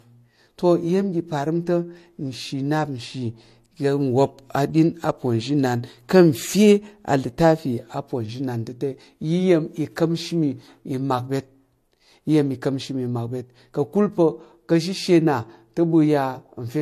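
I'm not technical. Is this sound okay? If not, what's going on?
No. All the way through, the speech has a swirly smearing mixed with a grainier edge, and nothing sounds above 13.9 kHz. Hearing two different kinds of damage at once, not one, points to transcoding between lossy codecs, likely re-saving as MP3.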